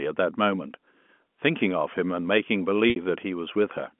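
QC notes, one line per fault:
2.90–2.96 s, packet loss with pitch repetition: 60 ms of audio was lost, which fits three 20 ms packets. The receiver looped the last pitch period and faded it over about 50 ms, so a brief buzzy hold dips nearly silent before the sound cross-fades back.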